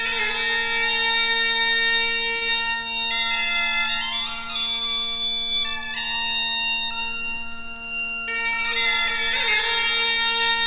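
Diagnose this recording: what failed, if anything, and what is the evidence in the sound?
At 2.36 s a sound is held unnaturally long, with a slight buzz or dip, before the audio picks up again at 2.43 s with nothing skipped. That is a short stall from a late packet, at the network and jitter-buffer stage. A packet arrived late, the buffer ran dry, and the receiver stretched the last sound to fill about 52 ms. Playback then resumed from the same point, now running about 52 ms later. The band-limited call path, with nothing above 4 kHz, points to a narrowband codec such as G.711 A-law.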